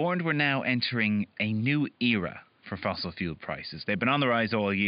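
No technical faults can be heard in the speech, and the only other sound is the room's own background noise, which sits about 39 dB below the voice.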